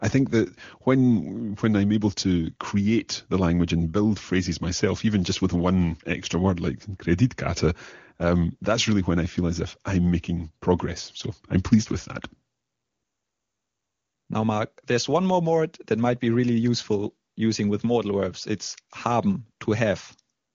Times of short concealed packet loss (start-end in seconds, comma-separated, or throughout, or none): none